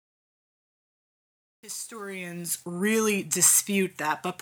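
The fade-in keeps too few bits and adds no dither, which fits roughly 9-bit resolution, causing truncation distortion from 0.0 to 2.65 s. The audio is gritty, worst until 2.48 s.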